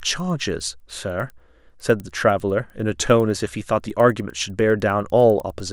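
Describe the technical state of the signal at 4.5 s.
At 4.5 s the speech carries a resampler restarted on every block, a fault that runs through the whole clip. Each 100 ms block is converted on its own, so the filter at every block edge works from missing or wrong neighbouring samples, which fits an upsampling from 24 kHz to 48 kHz. The small edge errors sound like a steady ticking at 10 Hz, audible only while the speech is present.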